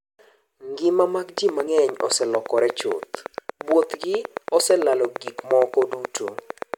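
From 1.38 s to 6.75 s, a regular train of clicks ticks through the speech at about 8.8 per second, roughly fifty in all. The likely cause is electrical interference. Each click appears as an evenly spaced vertical stripe on the spectrogram and a sharp spike in the waveform, peaking about 10 dB above the speech.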